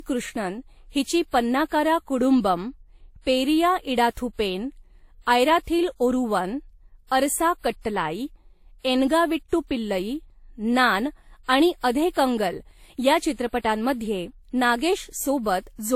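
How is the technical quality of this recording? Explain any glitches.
The recording's quality is degraded by one fault that runs through the whole speech clip. From start to finish the sound carries two different sets of coding artefacts heard together, with a hard ceiling where nothing comes through above 16.5 kHz. This points to transcoding between lossy codecs, likely a low-rate Vorbis encode later re-encoded as WMA. The second coder spent bits reproducing the first one's artefacts, added its own, and kept the lower cut-off.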